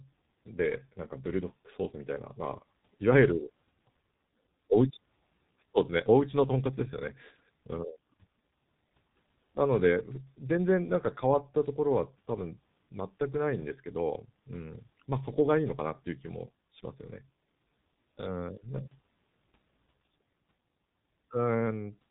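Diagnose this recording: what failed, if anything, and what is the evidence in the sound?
The failure is at the codec stage: the whole recording has been through the G.723.1 codec, and the damage is heavy. The speech sounds muffled and hoarse from start to finish, with consonants smeared together, which fits a bitrate of around 6.3 kbit/s. On a spectrogram, energy stops at a hard ceiling at 3.8 kHz, and the harmonics look blurred in blocky 30 ms steps. That is because the codec's coarse vocal-tract model updates only once per frame.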